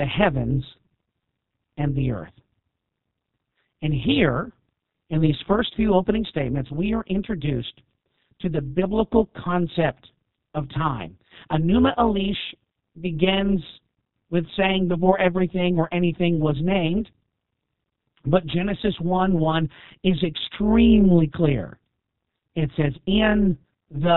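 Throughout, the speech passes through the G.729 codec, with damage that is plainly audible. The sound points to the 8 kbit/s G.729A variant. The codec rebuilds each frame from a vocal tract filter, a pitch predictor and a few pulses, and nothing above 4 kHz survives, so the speech comes out band-limited, rough and faintly synthetic.

Also present throughout is overlap-add ripple. Frames were rejoined with windows whose overlap does not sum to a steady gain, so the level swings by about 11 dB once per frame, at around 150 Hz. This is heard as a metallic buzz with extra tones around each note, laid over the whole clip.

From 6.67 to 6.74 s, between "these first few opening" and "are introduced to the", there is VoIP packet loss concealed by the speech codec. The gap fits a single lost 30 ms packet. The decoder fills it by stretching its last pitch and filter with falling gain, so the sound turns into a brief buzzy tone or coloured noise that fades, and the speech stays weak for a short time after the stream resumes.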